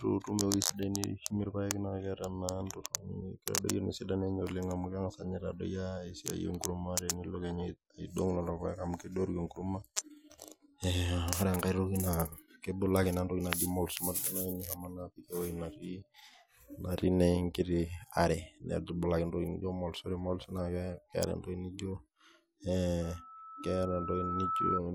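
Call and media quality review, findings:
Loudspeaker feedback squeal, 23.02–24.81 s. Steady 1.3 kHz tone swells over roughly a second and a half to about 5 dB above the speech. Mic capturing its own loudspeaker; loop gain exceeds unity at 1.3 kHz.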